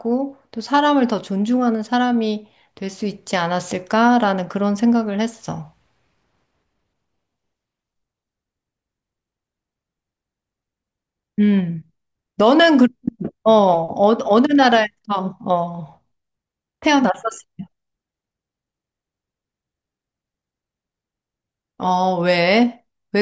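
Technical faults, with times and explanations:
No technical faults can be heard in the speech.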